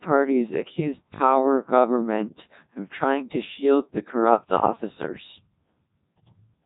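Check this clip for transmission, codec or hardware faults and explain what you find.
There's one fault, and it runs the whole way through: the speech has been squeezed through a Codec 2 vocoder, and the damage is heavy. Only pitch, voicing, energy and a rough spectral shape survive, then get rebuilt from sine waves, so it comes out robotic and buzzy, with nothing above 3.8 kHz. The coarseness fits the 1.2 kbit/s mode.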